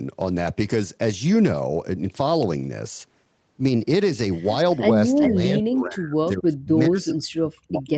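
At 5.2 s, for about a tenth of a second until 5.31 s, a delayed copy of the speech returns. This is echo leak. It most likely came from a loudspeaker on one side whose echo canceller let part of its microphone pickup through. The copy trails by about 0.4 s and sits only a few decibels below the direct speech. On a spectrogram it shows as a short repeat of the preceding harmonic pattern, offset in time. It stays under the 8 kHz ceiling of the Opus call path.

From 5.29 s to the end of the clip, the speech is suppressed in double talk. With both ends active, the echo canceller likely could not tell the local talker from loudspeaker echo and pulled the level down. The speech dips and breaks up in pieces, at worst by roughly 40 dB. In the waveform the envelope collapses in uneven chunks. The spectrogram shows harmonics fading or going dark in patches, with the upper band thinning.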